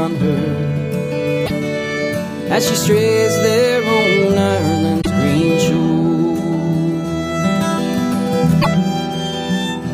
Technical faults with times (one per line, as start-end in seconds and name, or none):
1.43-1.50 damaged data in a compressed stream
4.98-5.07 damaged data in a compressed stream
8.58-8.67 damaged data in a compressed stream